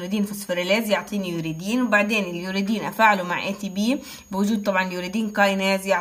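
A switching power supply somewhere in the chain is running in an audible burst mode, or beating against a second supply, so its switching energy leaks into the audio as a switching supply whistle. From start to finish a thin, high whistle sits between about 6.5 and 6.7 kHz, roughly 30 dB below the main sound. Its pitch wanders within that band.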